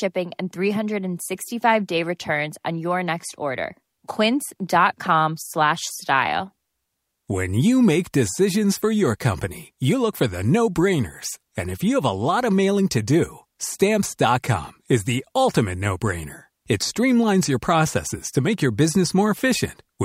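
No technical faults can be heard anywhere in this recording.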